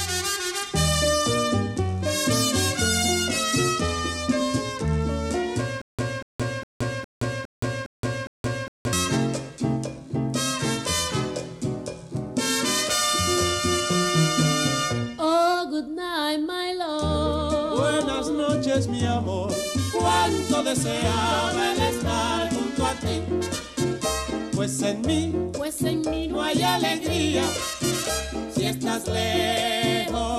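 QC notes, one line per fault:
5.82–8.93 s, stutter with silent gaps: the same 238 ms burst of sound plays seven times, each followed by about 171 ms of silence, giving a steady 409 ms repeat cycle. The evenly spaced bursts separated by dead air make the sound jerk in place instead of moving forward. The likely cause is a stalled player or stream replaying its last buffered fragment on each retry and then running dry. The material that should have played across this span is missing.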